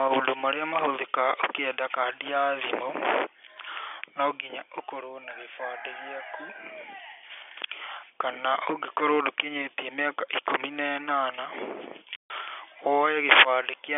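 At 12.16 s the speech drops out completely until 12.3 s. This is packet loss filled with silence. About 140 ms of audio never arrived, and the receiver played nothing in its place. That span fits seven lost 20 ms packets. The gap starts and ends abruptly, with hard edges. The narrow telephone band of the G.711 coding carries on unchanged on either side of the hole.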